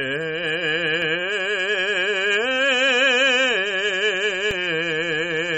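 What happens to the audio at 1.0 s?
At 1.02 s the output buffer runs dry, an underrun with held sample. For under a millisecond, which fits a gap of about 32 samples, the converter holds its last value. The waveform goes flat and the music briefly stops, then resumes after a sliver of live audio was lost.

Around that moment, as across the whole clip, nothing sounds above 8.3 kHz and the music has a watery, swirly character with smeared attacks. This is likely MP3 compression at a low bitrate, which fits something near 32 kbps.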